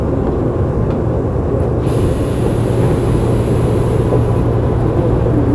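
No technical faults can be heard anywhere in these everyday sounds.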